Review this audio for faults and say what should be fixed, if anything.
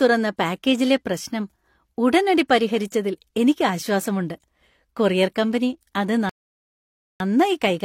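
A rebuffering stall interrupts the speech right after "കൊറിയർ കമ്പനി", going silent from 6.29 s to 7.20 s. The player exhausted its downloaded audio and paused until more data arrived, adding 0.91 s of dead air. Unlike a dropout, where a chunk of sound vanishes and the speech jumps ahead, here the sound picks up exactly where it stopped, so nothing is missing. A larger playback buffer or adaptive bitrate switching would prevent it.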